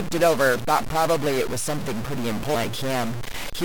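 A data bit in the sample path is likely stuck at a fixed value, from a broken line or converter, so roughly half the samples in this speech recording land off by that bit's weight, giving distortion throughout and a noise floor filling the pauses.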